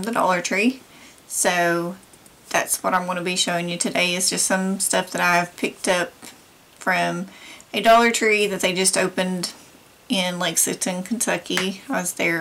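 Throughout the clip, the loudest peaks break into a harsh crackle and fuzz. This is hard clipping: the audio was driven about 13 dB past what one stage could pass, so a small fraction of peaks were sliced flat, adding bright high harmonics.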